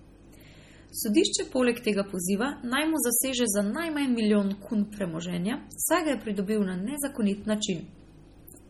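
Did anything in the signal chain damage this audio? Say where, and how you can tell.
Yes. Throughout the speech there is a watery, swirly quality, with metallic chirps on s sounds, smeared consonant attacks and nothing above 17 kHz. That points to the codec stage, likely heavy MP3 compression at a bitrate near 32 kbps, starving weak frequency lines so they flicker between frames.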